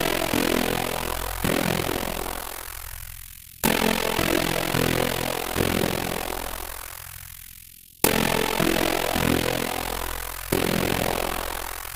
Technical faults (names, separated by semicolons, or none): overlap-add ripple